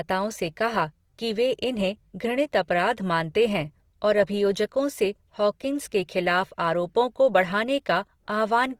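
The speech has likely been put through Opus compression at a low rate, and the damage is plainly audible from start to finish. The encoder appears to be running in its music (CELT) mode and, short of bits, fills bands with folded or noise-like content instead of leaving gaps. That fits a bitrate around 24 kbps. The result is a rough, grainy texture on tonal parts of the sound, while the bandwidth stays full, reaching about 20.3 kHz.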